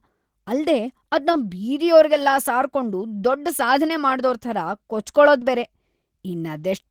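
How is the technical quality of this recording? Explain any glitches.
There are two small glitches in this speech clip, both short concealed packet loss. They land at 1.31 to 1.35 s, just before "ಬೀದಿಯೋರ್ಗೆಲ್ಲ ಸಾರ್ಕೊಂಡು", and at 5.39 to 5.43 s. Each time about 20 ms of audio didn't arrive in time, so the decoder stretched the preceding sound to cover the gap and then crossfaded back. You hear it as a quick smear or tiny wobble.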